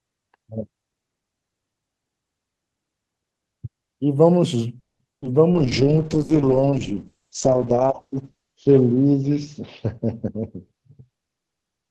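A call audio freeze runs from 4.79 to 5.01 s. The sound stops for about 0.2 s, nearly all of it silent, then resumes where it left off with nothing missing. The likely cause is delayed packets draining the jitter buffer, which inserted a pause and added 200 ms of delay.

Short concealed packet loss follows shortly after, at 5.21 to 5.24 s and again at 5.24 to 5.27 s. Each time, 20 ms of audio never reached the decoder, and the receiver bridged the gap by extending the preceding sound. The result is a brief smeared, wobbly blip.

A call bitrate drop begins at 5.53 s and lasts to the end. Opus falls from 32 kbps to 7 kbps and stays at that floor for about 2.7 s. Its audio bandwidth narrows from 12 kHz to 8 kHz, so the speech turns muffled, rough and watery as coarser coding takes hold.

A jitter buffer speed-up spans 10.24 to 11.44 s. The buffer had accumulated excess audio, so the receiver repeatedly cut out short pitch-period slices, about a fifth of a second in total. 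The speech plays at roughly 118% speed at unchanged pitch and sounds hurried.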